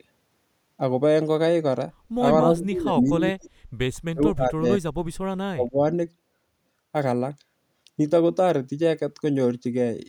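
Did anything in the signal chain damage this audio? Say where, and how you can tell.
Yes. In the call processing stage, the speech was likely suppressed in double talk: the echo canceller treated the talker as loudspeaker echo and cut the gain. The speech sinks about 20 dB at 2.44–3.5 s, about 30 dB at 4.13–4.66 s, and about 35 dB at 5.51–5.81 s.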